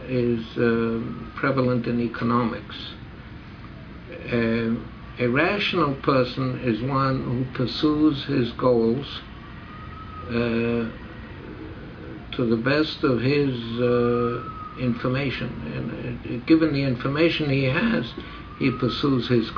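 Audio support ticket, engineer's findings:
No audible fault found on review; nothing to escalate.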